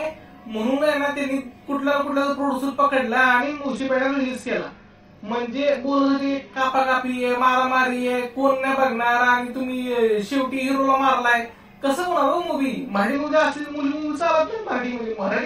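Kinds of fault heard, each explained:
Channel delay (doubling): One channel arrives about 40 ms behind the other, and when they're folded to mono you hear the late copy as a tight slap right behind the original. It sits at the same level, so everything sounds doubled from start to finish.
Bluetooth SBC bit pool drop: The link got congested and the encoder cut its bit budget. From 3.41 to 6.61 s and again from 13.14 s to the end, the treble dulls and gritty noise creeps in, which fits a bit pool falling from 28 to 9, around 78 kbps.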